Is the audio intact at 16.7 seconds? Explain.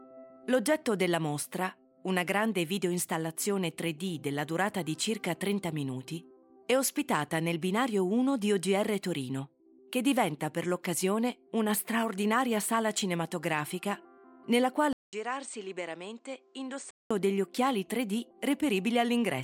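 No. From 14.93 to 17.11 s, the sound turns dull and boxy, with nothing above 8.8 kHz. It drops roughly 10 dB, after a 200 ms gap. Faint new hiss sits far below. The likely cause is an input switched to a poorer device.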